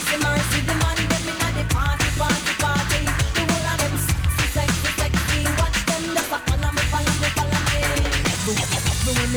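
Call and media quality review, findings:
Sample clock jitter, whole clip: grainy hiss riding on the loud, bright bits, gone in the quiet gaps. Probably the converter clock wandering by a few microseconds, so samples land early or late. Error sits roughly 25 dB under the signal, worst on steep transients.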